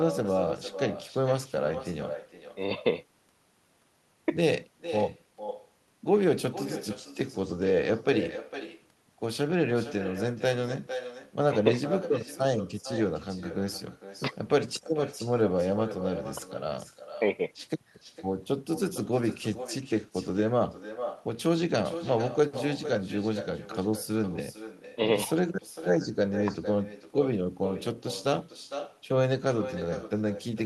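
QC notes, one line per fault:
Throughout: echo with no canceller. Every phrase of the speech returns about half a second later as a fainter copy, roughly 11 dB below the direct sound, thinner in tone. The far end is playing the call over a loudspeaker, its microphone captures that playback, and no echo cancellation strips it out, so the signal travels the network round trip and arrives back as a delayed shadow trailing the talker.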